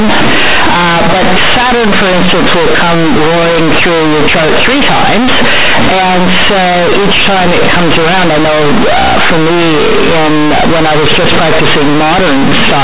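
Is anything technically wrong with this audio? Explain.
Yes. Across the whole recording, the speech suffers from companded audio read as linear: mu-law bytes are being played as plain 8-bit samples without expansion. Because mu-law stores level logarithmically, each sign change now throws the output across roughly half its range, so quiet passages swell to match loud ones. It sounds harsh, loud and buzzy, with heavy noise filling the pauses. The waveform looks like a dense block with no dynamic contour, and the spectrogram shows broadband smear up to the telephone band's 4 kHz ceiling, with no clean gaps between utterances.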